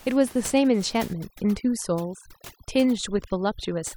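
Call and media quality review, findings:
Overdone noise removal, 1.13 s to 3.96 s. Noise suppressor set too aggressive: bands near its noise estimate cut deep or gated off, quiet speech components lost with them. Background drops and breaks up into twinkling specks.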